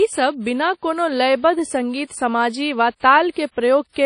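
A low-bitrate WMA compression stage, likely an early WMA encoder at around 32 kbps, has processed this speech recording throughout. Its long transform blocks smear quantisation noise around each syllable, leaving a ringing, washy hiss that pulses with the voice, and nothing survives above about 10.1 kHz.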